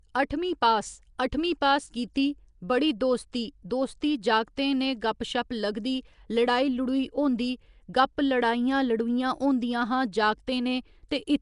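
Throughout, the speech has a rough, hissy halo and smeared, underwater quality with nothing above 10.6 kHz, likely Nellymoser compression filling starved bands with noise.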